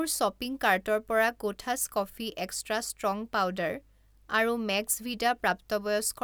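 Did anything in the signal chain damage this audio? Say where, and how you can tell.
No damage from any stage.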